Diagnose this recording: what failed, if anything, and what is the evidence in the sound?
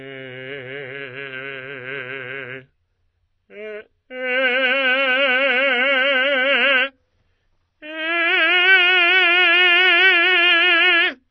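The codec stage is where this one went wrong, and it's there for the whole music clip. Nothing gets through above 6 kHz, so the top end is simply gone and everything sounds dull, with smeared, warbly coding damage you can plainly hear. That's likely AAC compression, and the low cut-off and damage level point to AAC-LC at around 24 kbps. With that few bits, the encoder drops the high bands completely and quantises what's left coarsely.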